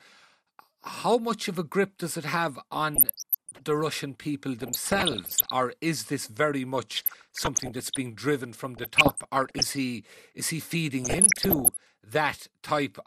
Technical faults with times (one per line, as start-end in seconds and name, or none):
0.00-13.06 MP2 compression
2.94-3.61 DAB burbling
4.59-5.50 DAB burbling
6.97-7.98 DAB burbling
8.77-9.77 DAB burbling
11.03-11.77 DAB burbling